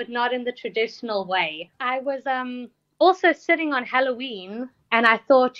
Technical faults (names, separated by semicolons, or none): none